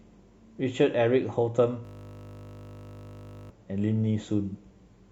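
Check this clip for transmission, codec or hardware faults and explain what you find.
Two faults turn up in this speech clip.

From 1.85 to 3.50 s there is a system hang loop. The computer or its audio driver stalled. Meanwhile the sound hardware kept replaying the same stretch of its ring buffer. The repeated piece lasts 20 ms, which fits a 20 ms buffer. It cycles at 50 Hz, more than eighty times over. Because the loop is so short, the speech gives way to a steady 50 Hz buzz until normal playback resumes.

From 4.49 to 4.54 s there is AAC frame loss with concealment. About 43 ms of coded audio went missing, which points to a single lost frame. The decoder covered the gap by rebuilding it from the last good spectrum. The result is a brief smeared, noisy or phasey patch in the speech rather than a silent dropout.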